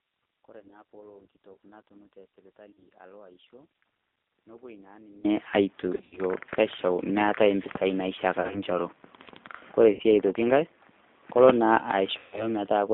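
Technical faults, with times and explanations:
throughout G.729 codec: The speech sounds slightly rough and synthetic, with a muffled, telephone-like band running from about 200 Hz to 3.7 kHz, and the codec damage is plainly audible. This is the 8 kbit/s G.729A codec. It does not carry the waveform itself. It sends a vocal tract filter, a pitch estimate and a few pulse positions, and the decoder rebuilds an approximation from those, which gives the grainy, artificial edge.
0.00–5.25 s one channel inverted: For the first five seconds the speech is faint, about 26 dB quieter than the rest. It then returns to full level. The likely cause is reversed polarity on one stereo channel. When the two channels are summed to mono, the centred speech they share cancels, and only the small difference between them remains audible.
0.59–0.82, 2.73–2.78, 5.95–6.21, 8.42–8.60, 9.93–10.01 and 12.18–12.50 s VoIP packet loss concealed by the speech codec: At each of these points the speech smears into a buzzy, held tone or coloured noise that fades, then recovers weak and distorted. 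Missing audio ranges from 40 ms to 160 ms per event. The loss is scattered at 0.59, 5.95 and 8.42 s, with the longest gap of 80 ms near 6 s. The decoder fills each gap by extending its last pitch and filter with falling gain. Because each frame depends on the one before, the damage lingers after packets arrive again.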